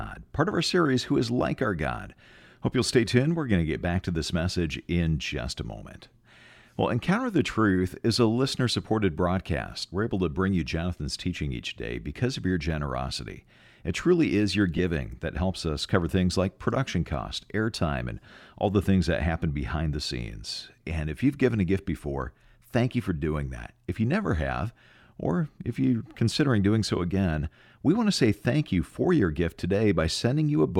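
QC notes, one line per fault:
14.77–14.79 s, lost LE Audio frames: between "truly is your" and "that helps us cover", a brief noisy smear replaces the tone of the speech. About 15 ms of audio went missing, which fits two dropped Bluetooth LE Audio frames, and the LC3 decoder filled the gap by reusing the last spectrum with randomised signs.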